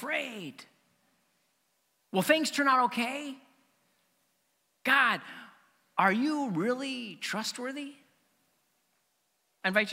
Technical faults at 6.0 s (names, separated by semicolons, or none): none